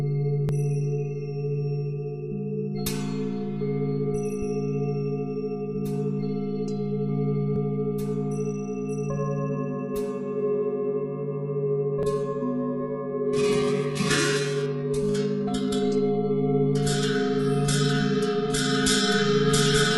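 The audio has three abrupt skips, at 0.49 s, 7.56 s and 12.03 s. Each one is a jump in the sound with no silence. The skip is tiny, about 10 ms each time. The likely cause is a dropped buffer (overrun). The program did not read its input in time, so the hardware wrote over that short block. The sound on either side was then spliced together directly. From 11.75 s to the end, the quality falls suddenly and stays low, and codec artefacts grow. There is no gap at the change. This is an adaptive stream at a lower bitrate. The connection slowed, and the player switched to a cheaper version of the stream. The sound fits a move from an AAC-LC stream at 96 kbit/s to a very low-rate HE-AAC one, at around 12 kbit/s.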